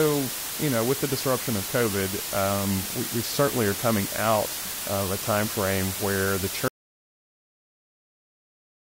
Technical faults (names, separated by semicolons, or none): low bit depth with dither; audio dropout to silence